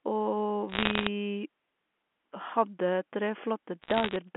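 Bit errors on a digital phone line crackle through the speech at 0.69–1.07 s and 3.82–4.16 s: flipped bits turn single G.711 samples into sharp ticks.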